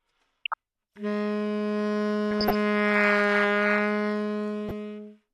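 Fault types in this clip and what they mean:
DAB burbling: at 0.45–0.54 s, 2.31–2.55 s and 4.69–4.71 s, the audio briefly burbles, with the longest burst in the middle. Weak reception lets bit errors, well under one percent, slip past the error correction into the MP2 data. Corrupted samples put short blips of noise into single sub-bands, and corrupted scale factors make individual sub-bands leap in level for up to a frame, across a short run of frames.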